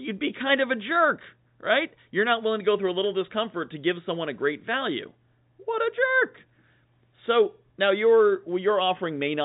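Nothing goes wrong anywhere in this speech, which simply comes through a G.711 telephone line with the usual narrow band that stops around 3.8 kHz.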